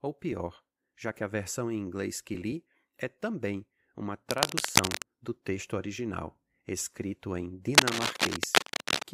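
A worn cable or connector being moved is the likely cause of the cable scratch noise at 4.30 to 5.02 s, after "li é também uma", and again at 7.74 to 9.04 s, after "texto original escrito em": fluctuating contact resistance adds dense, uneven scratching bursts slightly louder than the speech.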